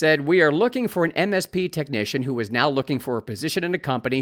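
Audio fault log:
throughout: clock drift between sender and receiver. Tempo feels faintly unsteady, with small hiccups, because the sender's clock runs about 3% slower than the receiver's.
0.18–4.10 s: repeated timing corrections. Slight unevenly spaced stutters as the receiver repeats short pieces to cover its draining buffer, stretching the sound to 97% speed and adding about a tenth of a second.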